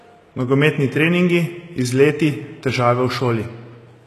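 Throughout the speech, sibilants sound gritty and lispy, which points to likely HE-AAC compression near 16 kbps; a spectrogram shows copied-looking treble bands ending sharply at 12.3 kHz.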